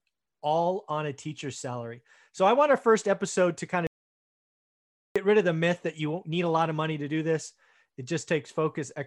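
At 3.87 s, right after "first episode to kind", the speech cuts to silence, an audio dropout to silence lasting about 1.29 s, likely from a lost input while recording continued. The waveform flatlines and the spectrogram goes blank until "rid of the myth" resumes at 5.16 s.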